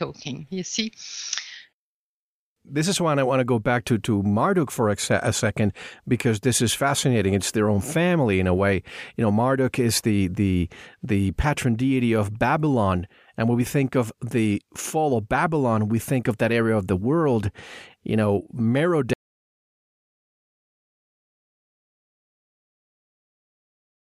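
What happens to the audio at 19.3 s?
At 19.3 s the clip is already inside an audio dropout to silence that began at 19.13 s and runs to the end of the recording. The speech cuts off abruptly mid-flow and is replaced by silence, with no room tone or noise floor remaining, so the gap sounds completely dead rather than quiet. The likely cause is a lost input, such as a disconnected device, failed link or accidental mute, while the recorder kept writing samples.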